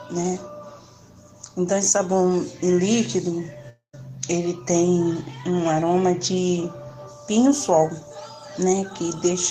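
The audio cuts out from 3.69 to 3.95 s. The last sound is stretched into a fading buzz for about 0.24 s. Then comes roughly 0.12 s of silence. About 0.24 s of material never returns. This is likely a long network dropout.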